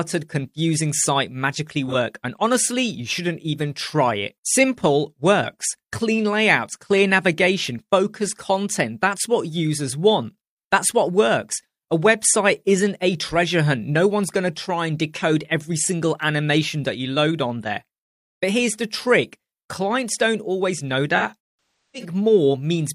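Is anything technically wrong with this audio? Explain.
Yes. There is AAC frame loss with concealment. At 1.89 s, about 43 ms of audio, which fits one lost frame, becomes a brief smeared, phasey patch. From 21.17 to 22.09 s, gaps totalling about 555 ms are scattered across roughly 850 ms. The longest run is around 300 ms, and there the sound fades toward silence and then returns. The decoder fills each gap by reusing the last good spectrum, which separates this from a plain dropout's hard silent cut.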